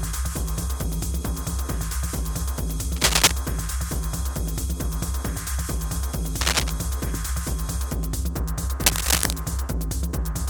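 Bursts of scratchy, rustling noise, louder than the sound at 2.96–3.33 s and 8.84–9.34 s and about level with it at 6.41–6.70 s, are cable scratch noise, likely from a worn cable or connector being moved.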